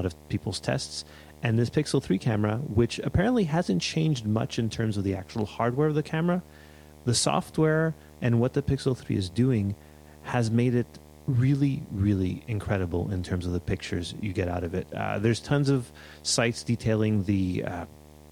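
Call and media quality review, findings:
Video or display buzz throughout speech: 75 Hz buzz with hash, well below the speech, roughly 25 dB down. Display or video cable coupling; the 75 Hz field rate, not 50/60 Hz, separates it from mains hum.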